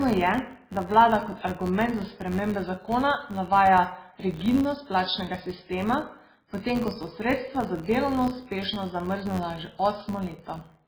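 Throughout the speech, the treble is cut off, and the remaining sound has a watery, swirling texture, with sibilants turning into metallic chirps and consonant attacks smeared. This is likely MP3 compression under a severe bit shortage, which fits a very low bitrate of around 16 kbps. The encoder discards the top band entirely, and weak frequency lines drop in and out from frame to frame, producing the swirl.

A filter restarted on every block also runs through the whole clip. The filter loses its memory at each block boundary and begins from silence, so every block starts with a small transient. The repetition rate is 93.8 Hz, which fits a 512-sample buffer. These transients merge into a steady buzz that rises and falls with the loudness of the speech.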